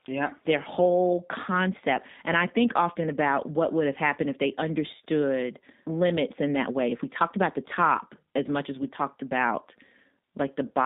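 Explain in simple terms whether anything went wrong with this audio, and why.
Throughout, the speech sounds thin, rough and slightly robotic. It went through the G.729 phone codec, which rebuilds speech from a simplified model and cuts off higher tones.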